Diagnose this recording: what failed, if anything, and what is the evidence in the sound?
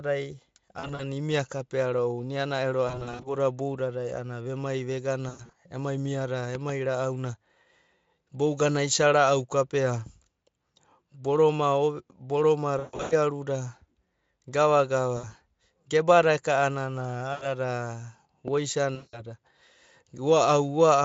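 Network stage, VoIP packet loss concealed by the speech codec. Bursts at 0.79–1.03, 2.87–3.28, 5.29–5.55, 12.79–13.14, 15.17–15.31, 17.33–17.47 and 18.95–19.21 s, the worst at 12.79 s with a 140 ms gap. The decoder repeats its last pitch and filter, so the speech smears into a buzzy tone that fades and stays weak briefly afterwards. The gaps fit 20 ms frames. The Speex decoding itself is nearly clean. On a spectrogram, harmonics go flat and horizontal and then dim, and the waveform shows repeated, decaying cycles.

Loud pop, probably an electrical transient in the analogue wiring or a switching glitch. There are two sharp pops between 6.55 and 6.72 s and a single one at 18.48–18.50 s, each about 10 dB above the speech, which carries on underneath. On the waveform they are isolated spikes that stand far above the surrounding envelope. On the spectrogram they are thin vertical broadband lines running through every frequency.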